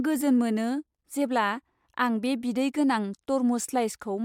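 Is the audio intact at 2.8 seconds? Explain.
Yes, at 2.8 seconds the speech plays through intact, with no dropout, click or other audible disturbance at that moment.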